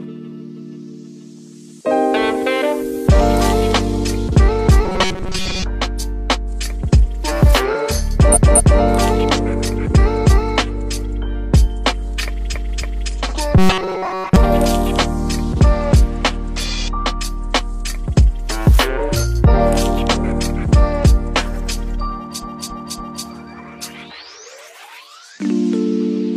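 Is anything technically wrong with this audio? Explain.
Yes, two kinds of fault are audible.

From 4.85 to 5.63 s and again from 13.58 to 14.36 s there is robotic sound from repeated short buffers. Most of the sound is replaced by loops of roughly 5 ms, likely because audio was arriving too slowly for playback. The repetition imposes a steady 188 Hz metallic buzz that only loosely tracks the underlying sound. Unlike a stutter, no recognisable chunk is replayed.

At 8.32–8.78 s, 12.50–13.05 s and 22.39–23.23 s there are repeated frames. A block of compressed audio, about 0.23 s long at the first point and 0.28 s at the others, is decoded again. It plays twice extra at the first two points and three times extra at the last. Each repeat is heard as a stutter, a replay of the same stretch, and it lengthens the audio by 0.46, 0.56 and 0.84 s respectively.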